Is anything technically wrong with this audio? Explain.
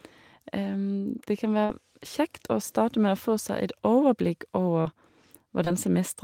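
Yes. Short concealed packet loss occurs at 1.65–1.71 s, 4.81–4.87 s and 5.65–5.68 s. About 40, 40 and 20 ms of speech went missing, consistent with lost 20 ms packets. The decoder extended the preceding sound to cover each gap, producing brief smears. On a spectrogram these show as flattened, repeated harmonics where the speech was voiced, or as shaped noise where it was not.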